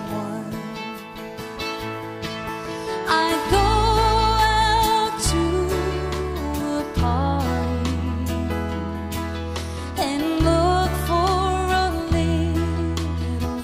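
No technical faults are audible.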